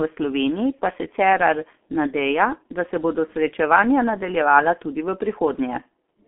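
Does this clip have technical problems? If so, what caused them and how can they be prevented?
Yes. Throughout, the speech sounds muffled and hoarse, with smeared consonants and nothing above 3.8 kHz, and the low end thins out below 250 Hz. This is heavy G.723.1 codec damage: long frames and a very low bitrate, fitting roughly 6 kbit/s, approximate the voice coarsely. Prevent it by routing calls through a wideband codec such as Opus or G.722 instead.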